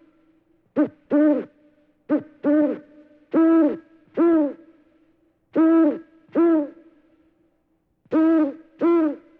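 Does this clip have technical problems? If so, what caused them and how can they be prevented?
No, this clip has no technical problems, so there is nothing that needs to be prevented.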